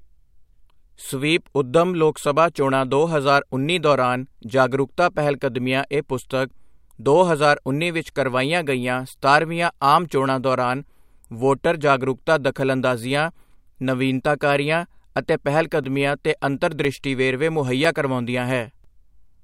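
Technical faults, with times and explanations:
15.84–18.85 s, periodic USB or driver dropouts: after "ਜਾਗਰੂਕਤਾ ਦਖ਼ਲਅੰਦਾਜ਼ੀਆਂ ਨਵੀਨਤਾਕਾਰੀਆਂ ਅਤੇ", a background task stalls the audio path every 1.0 s, blanking a few milliseconds to silence, heard as about four evenly spaced ticks in the speech.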